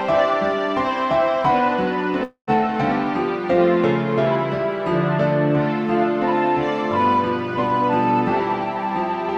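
A long network dropout runs from 2.23 to 2.50 s: the last sound is stretched into a fading buzz, then about 0.1 s of silence follows. This is likely lost packets, the receiver concealing the gap, with roughly a quarter-second of audio never played.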